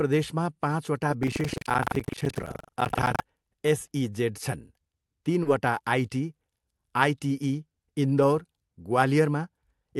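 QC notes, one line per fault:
1.20–3.22 s, buffer tearing: A steady robotic buzz at about 23.4 Hz rides on the speech for these two seconds and is present only while there is signal. The writer and reader of the output ring buffer have drifted out of step and cross inside every period, which fits a 2048-sample buffer. Roughly a fifth of each buffer replays audio around 150 ms old, and the hard joins on both sides produce the rattle at the buffer rate.
5.43–5.47 s, short concealed packet loss: About 20 ms of audio failed to reach the decoder in time. The receiver covered the hole by extending the preceding sound, carrying its pitch forward if voiced or shaping noise if unvoiced, then crossfaded back into the real stream. This is heard as a brief smear or wobble in the speech. The Opus call path limits the band near 12 kHz across the clip.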